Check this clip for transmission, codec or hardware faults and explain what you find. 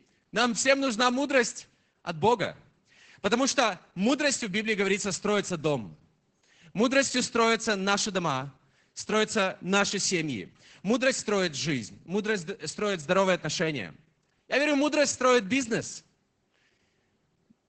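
There's one fault, and it runs the whole way through: Opus voice compression. The top end stops dead at about 8.8 kHz, so the speech sounds muffled, and there's a hoarse, slightly robotic edge on it. That fits Opus running its SILK linear-prediction coder in wideband mode at a starved rate, likely somewhere around 10 kbps. At that rate it has to code the excitation coarsely and throw away everything above the band edge, and that's where the heavy damage you hear comes from.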